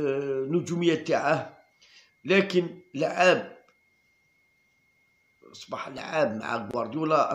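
A brief buzzing click at 5.98 s is a repeated buffer: new audio arrived late, so a 1.45 ms piece played three extra times, which fits a 64-sample buffer.

At 6.71 s the sound drops out for 26 ms with smeared edges, then resumes where it stopped. This is a gap at a join of encoded pieces, where untrimmed encoder delay and padding were left in.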